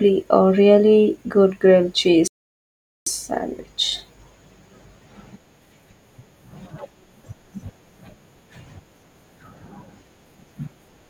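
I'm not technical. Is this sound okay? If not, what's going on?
No. At 2.28 s the speech cuts out and stays silent until 3.06 s, nearly 0.8 seconds. This is a playback stall, likely because the player ran short of data or was held up. Unlike a quick click or blip, the silence lasts long enough to clearly notice.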